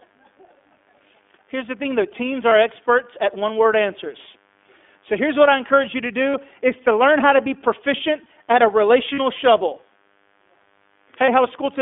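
A steady, raspy mains buzz at 50 Hz sits about 40 dB below the speech throughout, with switching spikes feeding harmonics well up the spectrum. The whole clip also carries iLBC codec damage: speech is confined to roughly 250 Hz to 3.5 kHz and sounds plainly rough and synthetic, consistent with the 15.2 kbps mode coding each 20 ms frame independently. Lost iLBC frames occur at 2.50 s (20 ms), 6.30 s (40 ms), 9.14 s (40 ms) and 11.26 s (20 ms). At each, the decoder repeats the last pitch cycle mixed with noise, producing a brief buzzy, held vowel before clean decoding resumes almost immediately.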